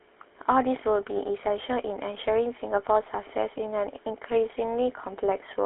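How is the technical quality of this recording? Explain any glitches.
The recording has been through a GSM full-rate codec, with plainly audible damage throughout. The codec rebuilds the sound from a vocal-tract model driven by sparse, regularly spaced pulses, which fits a bitrate around 13 kbps, inside a 300 Hz to 3.4 kHz band. The result is a buzzy, gravelly roughness with a thin, muffled top.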